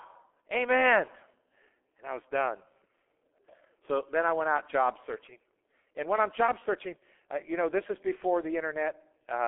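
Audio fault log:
Throughout, G.723.1 codec: heavy damage that fits a 6.3 kbit/s telephony coder. Nothing gets through above 3.7 kHz, and the band sits around 300 Hz to 3.4 kHz, so it's muffled. The slow-updating voice model leaves it hoarse and smears the consonants.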